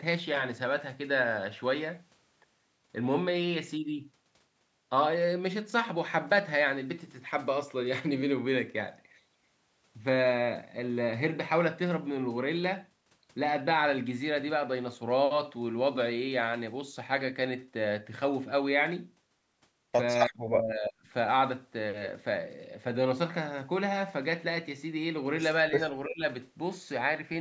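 From 20.27 to 21.04 s the speech sinks almost to silence for most of that stretch, and from 26.06 to 26.23 s it dips again, more shallowly, for a brief moment. This is likely speech suppressed in double talk: the echo canceller mistook the talker's voice for loudspeaker echo while both sides spoke and pulled the level down.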